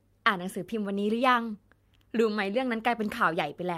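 Nothing goes wrong anywhere in this short bit of speech, so there's no fault to point to at any moment.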